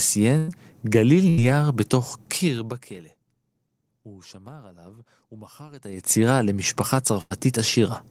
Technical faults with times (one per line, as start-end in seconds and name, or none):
0.37-0.50 burst of packet loss
1.30-1.39 burst of packet loss
2.32-3.16 zipper noise
7.21-7.32 burst of packet loss